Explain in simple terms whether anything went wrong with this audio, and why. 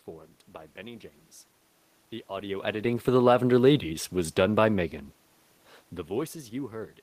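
The automatic gain control decided the input was too quiet and slowly turned its level up between 2.27 and 3.62 seconds, just before "was done by". As a result, the voice and the room's background noise both swell louder together over that second and a bit. The level changes around 2.5 and 5.5 seconds are the talker moving relative to the microphone.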